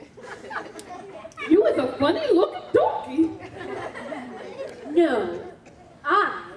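Nothing technically wrong turns up anywhere in this audio; it just runs along without a single glitch worth pointing out.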